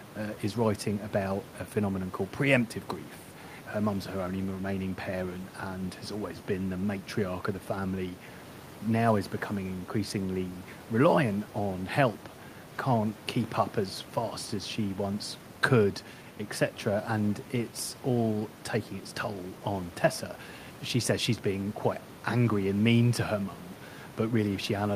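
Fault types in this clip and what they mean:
No technical faults can be heard in the speech. The room's own background noise sits about 16 dB below the speech and is part of the recording.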